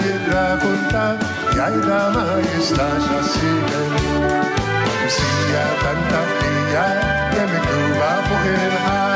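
Throughout the clip the gain swings by roughly 5 dB, leaving loud and soft parts squashed close together. This gain pumping is likely from gain set far too high, with a fast limiter or compressor clamping down on each peak.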